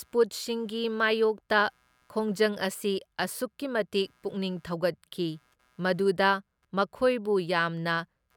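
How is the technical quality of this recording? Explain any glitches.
A faint computer activity noise runs through the whole speech clip. It sits roughly 45 dB below the voice. It pulses at around 150 times a second, giving a low buzzy chirp. Processor, graphics or mouse load shifts the shared ground of the audio circuit, so the noise follows the computer's activity, not the voice.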